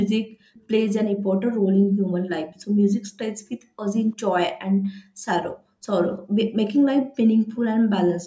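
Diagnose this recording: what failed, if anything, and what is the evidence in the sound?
The failure is in call processing, at the echo canceller. The background is gated by the echo canceller at 0.23–0.54, 1.15–2.14, 2.67–3.79, 4.7–6.37 and 7.01–7.16 s: the room sound sinks by up to about 40 dB and then comes back. While the loudspeaker plays, the canceller clamps the microphone path hard. Unlike a network dropout, the gaps track playback activity rather than cutting to digital silence.

There is also an echo leak at 0.54–0.63 s and again at 2.46–2.64 s. A faint, delayed copy of the speech arrives 345 ms late, far below the direct level. The likely cause is an echo canceller on a loudspeaker endpoint that let residual pickup through to be sent back. Room reverberation would give a continuous decaying tail, but this is a discrete repeat a third of a second behind, in short scraps. The audio's band-limit near 8 kHz belongs to the normal call path.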